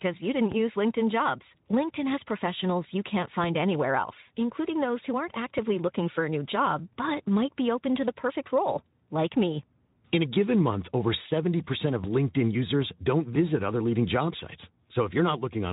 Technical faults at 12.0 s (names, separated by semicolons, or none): DC step